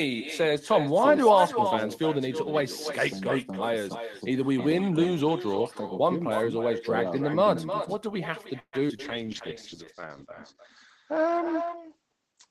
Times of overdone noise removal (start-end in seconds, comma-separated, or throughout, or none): none